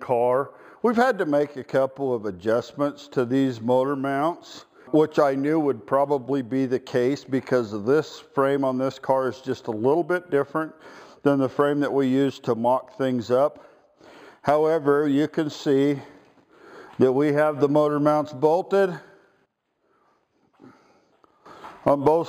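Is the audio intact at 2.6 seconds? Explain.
No. At 2.6 s, as throughout, the top of the band sounds dulled, with a faint metallic shimmer on bright sounds. This is imaging from linear upsampling: the rate was raised from 11 kHz to 44.1 kHz by straight-line interpolation, leaving a mirrored spectrum copy at about 5.5 to 11 kHz, roughly 35 dB down.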